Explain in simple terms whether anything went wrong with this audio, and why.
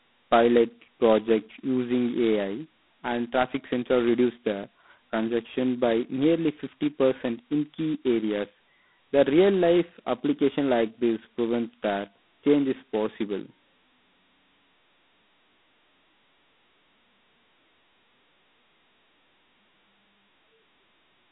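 A harsh, rasping hiss rides on the speech from start to finish, growing louder whenever the speech does, and everything sounds thin and muffled. That's G.726 ADPCM telephone coding at its lowest setting, which uses very few bits per sample and drops everything above about 3.9 kHz.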